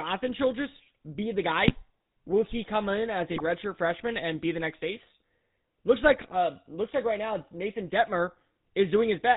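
The whole clip carries the GSM full-rate codec sound: a buzzy, gravelly roughness, and nothing above 4 kHz. The coder rebuilds the voice from a vocal-tract filter driven by sparse, regularly spaced pulses, which fits 13 kbps full-rate GSM, so the damage is plain throughout.

Then come two bursts of GSM bit errors, from 1.62 to 1.75 s and from 3.31 to 3.41 s. Corrupted filter, pitch or gain values reached the decoder for a handful of frames, so the spectrum warps and the level jumps into short squawks and gargling.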